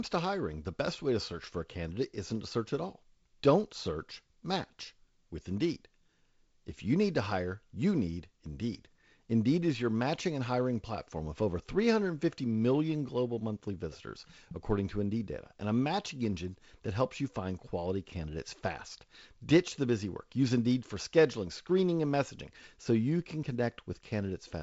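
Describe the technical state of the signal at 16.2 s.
At 16.2 s the signal is intact, with nothing beyond the light hiss of the G.722 wideband telephone coding that runs through the speech there.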